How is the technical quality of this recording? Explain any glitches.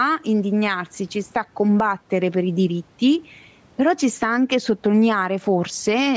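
The recording suffers from gain pumping that runs through the whole speech clip.

Gain pumping is heard from start to finish, with a gain swing of roughly 10 dB. The likely cause is input gain set far too high, with a fast limiter or compressor clamping each loud syllable. That squashes loud and soft passages toward one level. The room noise sits about 42 dB below the speech. The call's microphone processing, with nothing above 8 kHz, is not part of the problem.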